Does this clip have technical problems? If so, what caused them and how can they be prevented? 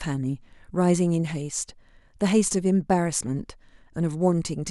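No, nothing in this speech recording stood out as a technical problem on listening, so there is nothing here that needs preventing.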